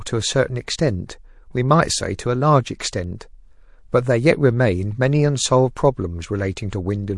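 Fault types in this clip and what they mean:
MP3 compression: Throughout the speech the sound turns watery and swirly, with sibilants chirping metallically, which is plainly audible damage. This is likely low-bitrate MP3 encoding, where the hearing model zeroes weak frequency lines frame by frame, consistent with about 48 kbps.
Pre-echo: From 6.70 to 6.73 s a hiss about 14 dB above the background leads a sharp attack by about 22 ms, softening it. Quantisation noise from a transform block of about 48 ms leaks ahead of the onset, which points to the encoder not switching to short blocks.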